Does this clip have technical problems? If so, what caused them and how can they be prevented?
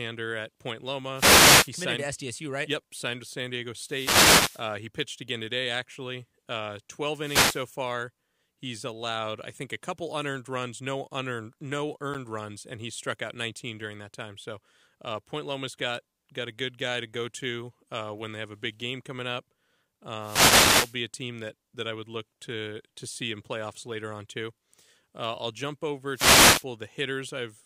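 Yes. Wireless microphone noise hits occur at 1.14–1.71 s, 3.78–4.74 s (just before "he pitched again today"), 7.16–7.68 s, 20.19–20.97 s and 26.13–26.65 s (after "I'll jump"). Each is a burst of static where multipath reflections cancelled the FM carrier and receiver noise rose. Prevent this with diversity receivers, better antenna placement and line of sight to the transmitter.

At 12.14 s, between "runs no unearned no" and "runs and he struck", the sound drops out for 10 ms and resumes. This is likely a Bluetooth stall, where interference delayed packets and the playback buffer briefly ran empty. Prevent it by reducing 2.4 GHz congestion and keeping the source close to the headphones.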